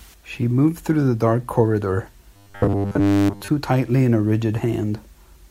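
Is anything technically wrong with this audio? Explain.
Yes. From 2.34 to 3.48 s, between "through the dark corridor" and "tightly in a", the speech becomes a rigid, metallic 100 Hz buzz that only loosely follows the words. This is robotic sound from repeated short buffers: audio likely arrived too seldom, so a 10 ms slice was replayed in place of most of the real signal.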